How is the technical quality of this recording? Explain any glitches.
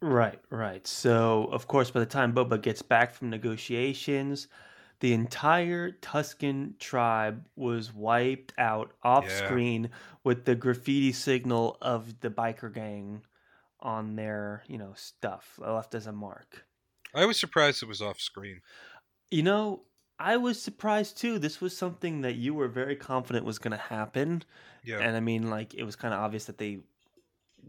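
Two sudden drops in level mark the recording, both in the speech near the start. Microphone volume stepped down at 2.04 s and again at 3.06 s: each time the voice and any background fall abruptly by about 2 dB, with no fade, and stay at the lower level. The likely cause is call software judging the microphone input too hot and cutting the device's input volume in one step, then trimming it once more a second later.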